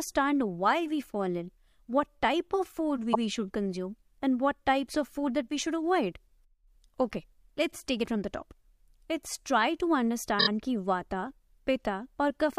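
Repeated frames: compressed blocks were sent more than once, so the decoder replays audio. At 3.12 s a 104.5 ms stretch plays again; at 10.39 s a 26.1 ms block repeats three extra times, stuttering.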